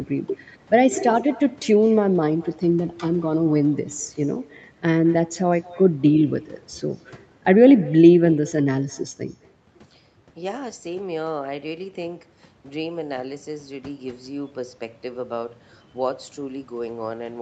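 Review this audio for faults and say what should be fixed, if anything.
Echo with no canceller, throughout: the far end's microphone picks up its loudspeaker and nothing removes it, so speech returns roughly a fifth of a second later, about 23 dB quieter. Turn on acoustic echo cancellation at the far end, or have that participant use a headset.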